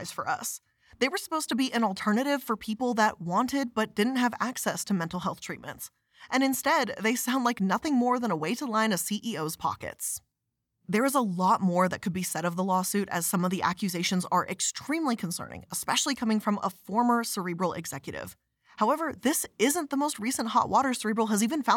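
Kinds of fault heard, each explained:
No technical faults can be heard anywhere in the speech. There is nothing to list under any kind of fault.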